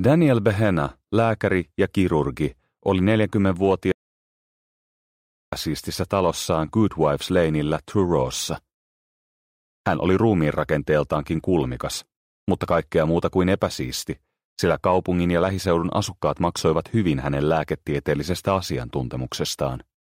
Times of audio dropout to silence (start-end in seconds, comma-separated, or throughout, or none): 3.92-5.52